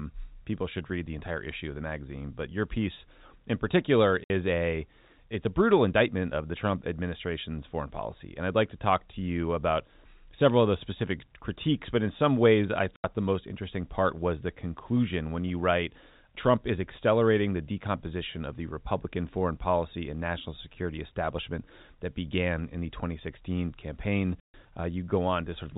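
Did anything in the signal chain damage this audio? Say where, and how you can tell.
Yes. Packet loss filled with silence occurs at 4.24 s (60 ms, after "your piece in particular"), 12.96 s (80 ms, after "in some ways I") and 24.4 s (140 ms). These are network drops, heard as hard-edged gaps in multiples of 20 ms, which fits 20 ms packets.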